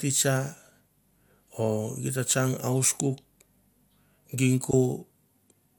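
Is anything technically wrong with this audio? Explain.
Yes. There is a short burst of DAB burbling from 4.71 to 4.74 s in this speech. Weak reception let bit errors slip past the error correction into the MP2 audio data. Corrupted samples then put short blips of noise in single sub-bands. The burst points to about four frames hit, at a low error rate well under one percent. It sounds like a quick burble over the voice.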